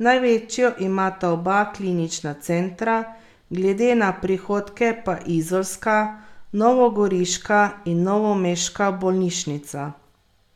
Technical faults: none

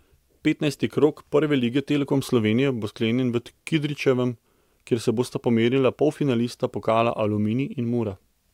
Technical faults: none

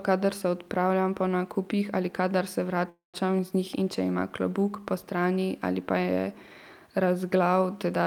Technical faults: call audio freeze

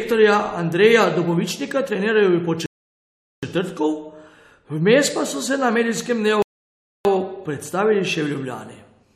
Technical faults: rebuffering stall

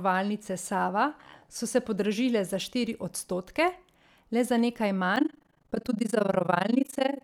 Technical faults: overlap-add ripple

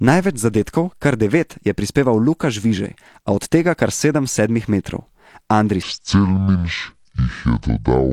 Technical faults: section at the wrong speed

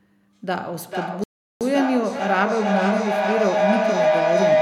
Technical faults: feedback howl; playback stall

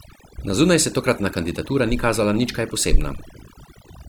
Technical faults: overdone noise removal

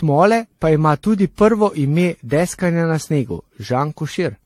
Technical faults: generation loss

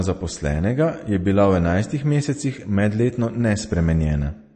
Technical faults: MP3 compression

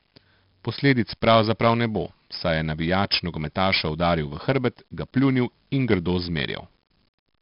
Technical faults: 4-bit ADPCM compression

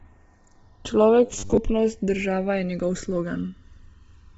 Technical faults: channels drifting apart; Bluetooth LC3 compression; robotic sound from repeated short buffers

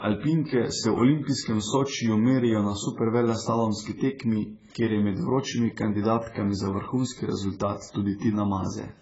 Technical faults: AAC compression

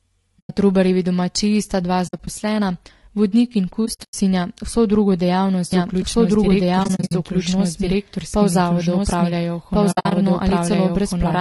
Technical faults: low-delay AAC compression; AAC frame loss with muting; doubled audio track

